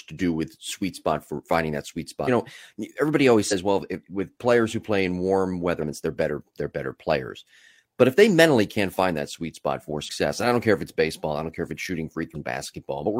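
Five short hits of damaged data in a compressed stream land at 2.24, 3.48, 5.78, 10.05 and 12.31 s, each about 50 ms long. The first sits right after "for finding that sweet", the second after "know everybody always", the third after "who play in warm". In each spot the decoder hit corrupted bytes, misread or dropped those frames and lost sync until it found the next frame header, leaving a brief glitch in the speech.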